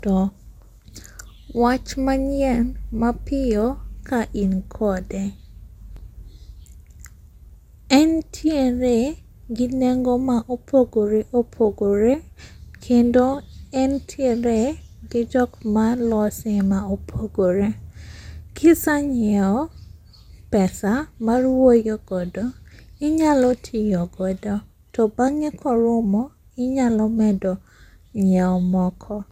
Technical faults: generation loss

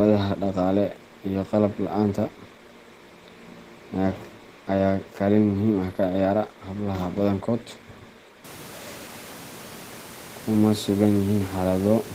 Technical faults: none

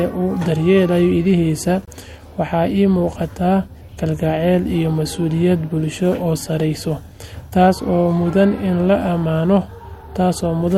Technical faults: gap at a join of encoded pieces

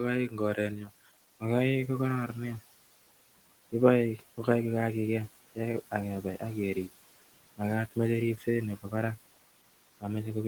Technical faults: noise suppressor artifacts; speech cut by the noise suppressor

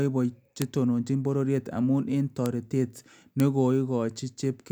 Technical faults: bit error spike

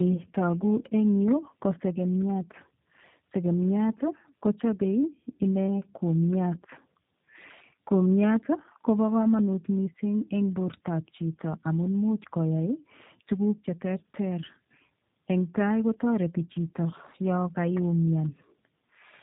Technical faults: tandem speech coding

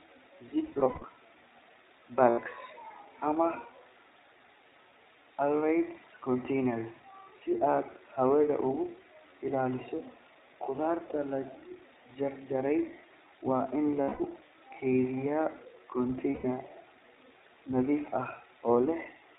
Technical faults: iLBC codec; lost iLBC frames

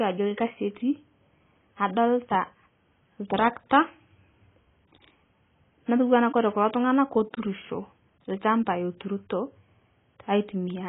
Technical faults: AAC compression

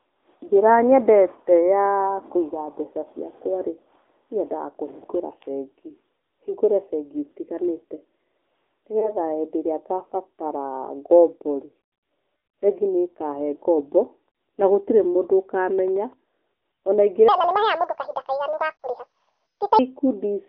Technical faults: AMR narrowband mobile codec; lost AMR speech frames; section at the wrong speed

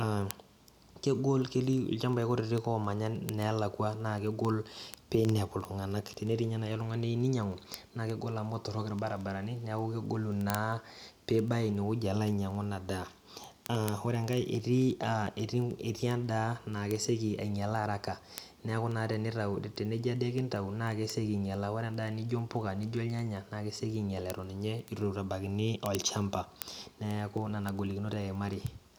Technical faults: word clock ticks

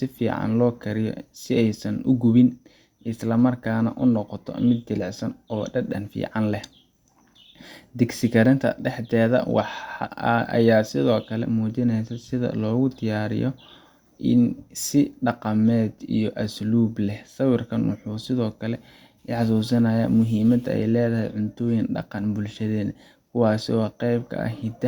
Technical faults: none

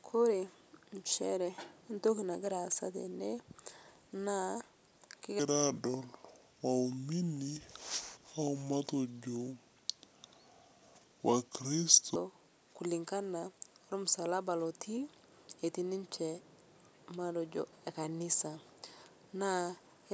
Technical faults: wrong sample rate

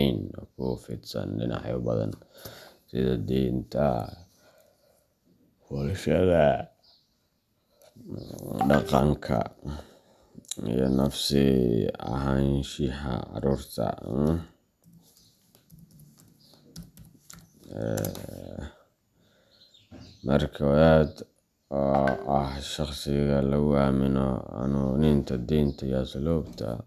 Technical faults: none

